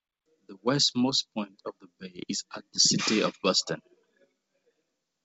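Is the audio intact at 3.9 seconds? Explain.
Yes, at 3.9 seconds the speech is intact, passing through the WebRTC call path without a dropout or glitch, with the band ending around 8 kHz as a G.722 call codec would leave it.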